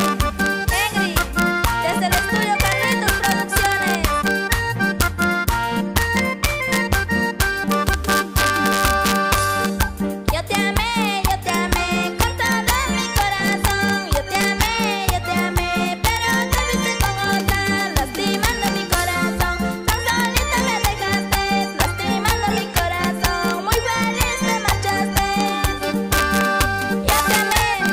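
Integer overflow runs through the whole clip: gain pushed about 1 dB past full scale, and the peaks that cross the limit, well under one percent of samples, wrap to the opposite sign instead of flattening. The result is sharp, violent cracks on loud moments, far sharper than ordinary clipping.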